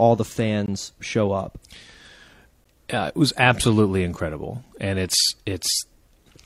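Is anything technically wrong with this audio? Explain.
Yes. A gap between stream segments occurs twice: from 0.66 to 0.68 s, and again at 2.64 s. The time stamps of adjacent segments don't line up, so the player pads the mismatch with silence. It inserts about 18.8 ms the first time and 12.1 ms the second. The two holes fall roughly 2 s apart, which fits 2-second segments. Each is a brief, hard-edged dropout in the speech, and no audio is lost, only delayed.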